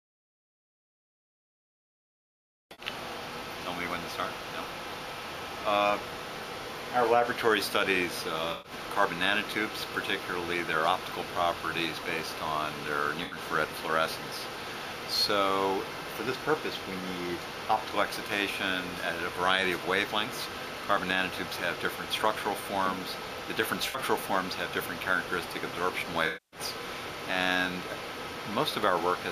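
AAC frame loss with concealment strikes at 2.72, 8.52, 13.23, 23.88 and 26.26 s. Each gap, lasting 64 to 256 ms, is filled from the last good spectrum, and the shorter ones sound smeared, noisy or phasey. On a spectrogram, each appears as a blurred, featureless band.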